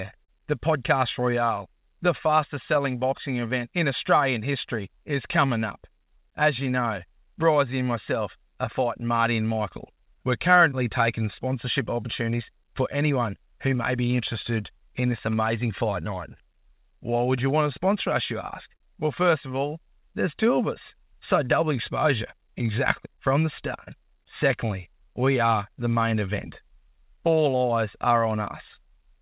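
Clock drift between sender and receiver runs through the whole recording: the sending side's clock is a few percent slow, so the receiver's jitter buffer keeps draining and the receiver has to stretch the audio to stay fed. This produces small, unevenly spaced timing hiccups from start to finish.

Repeated timing corrections span 0.19 s to 29.19 s. The receiver plays the sound at 97% speed, inserting short repeated pieces that add roughly a second overall. These stretches are always in the same direction, and the pace sounds subtly dragged and unsteady.

A short stall from a late packet occurs at 0.25 to 0.31 s. The buffer ran empty, and the receiver held the last sound for 38 ms until the packet arrived. Nothing is lost, but that moment is prolonged, with a slight buzz or dip.

A second short stall from a late packet occurs at 18.77 to 18.83 s, with the same mechanism. A 36 ms hold bridges the late packet. 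Playback then resumes exactly where it stopped, leaving a brief held sound with a slight buzz or dip rather than a gap.

Scattered short gaps fall between 22.38 s and 23.90 s. About four isolated packets went missing or arrived late, each patched by extending the preceding sound, with the longest around 30 ms. They come through as small ticks or smears inside otherwise continuous audio, all passing through a G.711 mu-law narrowband path with nothing above 4 kHz.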